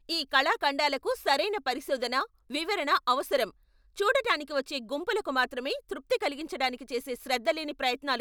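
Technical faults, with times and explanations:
Throughout: sample clock jitter. The converter's timing wobbles by something like a microsecond or two, so each sample lands a touch early or late, and the error tracks how steeply the waveform is moving at that instant. You get a fine hiss or grit riding on the speech, roughly 40 dB down, that gets stronger on loud syllables and bright sibilants and drops out completely in the pauses, since a flat signal has no slope for the timing error to act on.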